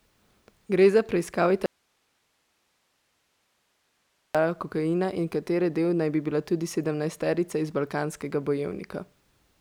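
From 1.66 to 4.35 s, right after "za preiskavo", the speech drops out abruptly to a faint hiss far below the signal, returning at "kokaina in katere". This is an audio dropout to a faint residue, likely a lost feed with the downstream path still live. On a waveform it shows as a sudden near-flat gap, and on a spectrogram as a dark band with only a thin broadband hiss floor.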